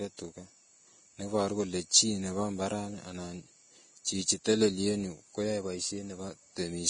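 Throughout the speech there is heavy damage, likely Vorbis compression near 24 kbps: nothing above 9.7 kHz, treble turned to grainy hiss, attacks blurred.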